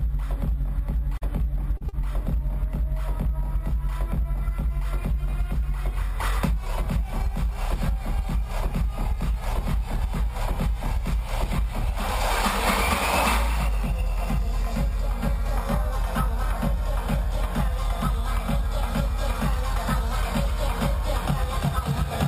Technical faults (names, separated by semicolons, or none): short concealed packet loss